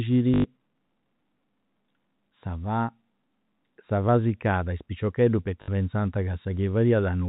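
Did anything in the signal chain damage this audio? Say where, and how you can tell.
Yes. Packet loss with last packet repeated occurs at 0.34–0.44 s and 5.62–5.68 s, just after "fà siccada is piciocheddus", at the network stage. Each gap is filled by replaying the last packet, so the speech stutters with a 50 Hz buzz, which fits 20 ms packets.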